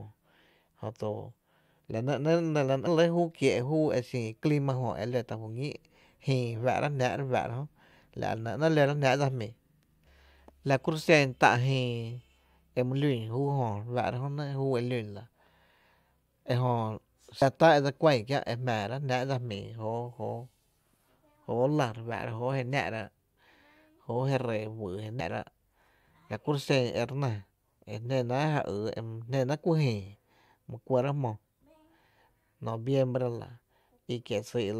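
At 2.86 s, 17.41 s (just before "tá e dse") and 25.2 s, compressed frames are skipped. Whole 21.3 ms frames, about three, three and four, go missing, so speech jumps ahead roughly 70 to 100 ms. Spectrograms show an abrupt content jump.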